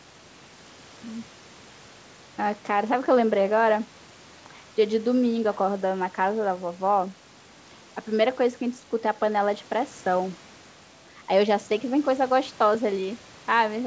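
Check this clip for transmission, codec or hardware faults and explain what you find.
Nothing here points to a transmission, codec or hardware problem; the speech comes through as a normal wideband call would, with room noise sitting about 25 dB below it and nothing above 8 kHz, which fits the call path.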